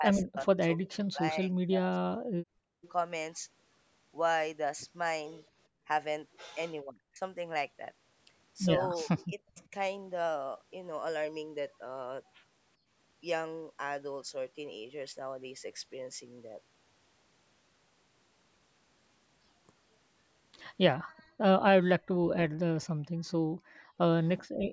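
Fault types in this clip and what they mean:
Speech suppressed in double talk: Near 0 to 2.5 s, 6.8 to 9.7 s and 21.8 to 22.3 s the talker's speech dips sharply or breaks into pieces, falling by up to around 40 dB for roughly two seconds in the first stretch and under a second in the others. The likely cause is an echo canceller unable to tell the talker from the returning far-end sound during overlapping talk, so it pulled everything down. A waveform shows chunks carved out of the speech envelope, and a spectrogram shows gaps or a dulled top end.
Background gated by the echo canceller: The room sound between words is pulled down whenever the canceller reacts to loudspeaker playback. The dips are brief, about 150 ms in total between 2.8 and 5.9 s at about 19 dB, a roughly 0.1 s dip near 12.8 s at about 16 dB, and about a second spread through the final stretch from 21.0 s onward, reaching about 30 dB. 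On a spectrogram the noise floor shows dark notches across all frequencies, and the waveform's low-level hiss abruptly thins and recovers.
Echo leak: A faint copy of the other side's audio comes back 390 ms late, roughly 25 to 30 dB below the main speech, in a short scrap around 2.8 s, near 9.2 to 9.7 s, and through most of 21.2 to 24.4 s. This is likely a loudspeaker-side canceller that failed to remove everything its microphone picked up. A spectrogram shows weak, smeared duplicates of the speech patterns trailing behind, while the waveform barely changes because the copy is so quiet.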